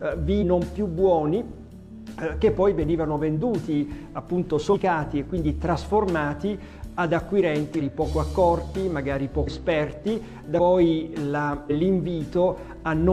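The audio lurches forward six times, at 0.38, 4.69, 7.76, 9.43, 10.55 and 11.66 s. Each time, a short stretch of sound goes missing, from roughly a sixth to nearly half a second. These are compressed frames skipped: whole frames never reached playback, so the audio jumps ahead in frame-sized steps that fit a frame of about 46 ms.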